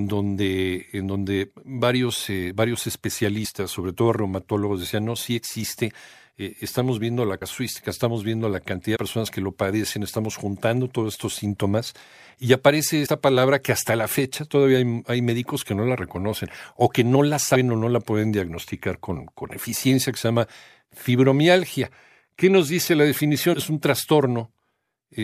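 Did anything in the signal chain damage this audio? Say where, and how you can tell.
Yes, at the codec or storage stage: compressed frames skipped. The speech jumps forward at 3.44 s (between "donde varios eh varios" and "sobre todo reumatólogos decían"), 7.41, 8.95, 13.05 (after "estos síntomas y aparece"), 17.54 and 23.53 s. Each time about 50 to 70 ms of audio vanishes, which fits two or three frames of roughly 26 ms. The join is a soft smeared blip rather than a sharp click, because overlapping frames blend at the seam. That sets it apart from a buffer dropout or edit splice.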